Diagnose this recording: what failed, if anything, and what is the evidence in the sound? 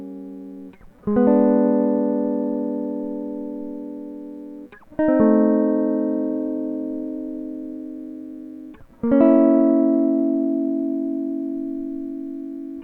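Nothing failed in this recording.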